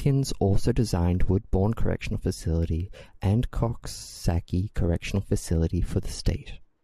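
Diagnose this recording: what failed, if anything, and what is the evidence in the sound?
Nothing failed; no fault can be heard in the recording.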